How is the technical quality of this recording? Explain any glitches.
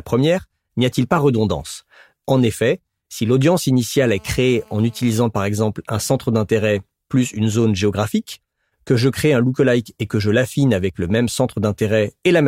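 One glitch affects this speech recording: a GSM phone buzz from 4.06 to 5.14 s, between "effet si l'audience" and "par exemple un centre". A nearby 2G phone on a call transmitted in bursts 217 times a second, and the audio circuitry rectified those radio pulses. The result is a steady, raspy 217 Hz buzz full of harmonics, unrelated to the speech and about 31 dB below it.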